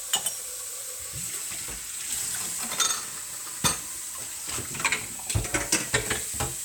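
Sound recording with no audible technical faults anywhere in it.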